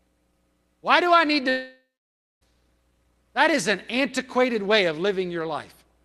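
At 1.49 s the speech breaks off, and the sound does not return until 2.43 s. For the first part of that stretch, the last sound carries on as a buzz or hiss that fades away. The final 0.6 s or so is left as silence. The speech then resumes further on, with roughly 0.92 s of it gone. This is likely a long network dropout. The receiver filled the gap with concealment until it had nothing left to extend. The call path's Opus coding keeps content up to about 12 kHz.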